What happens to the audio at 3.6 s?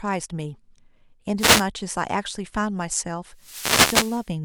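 A wireless microphone noise hit runs from 3.35 to 4.32 s: the FM radio link fades, so receiver hiss swells into a swish, showing as broadband spectrogram noise over the speech.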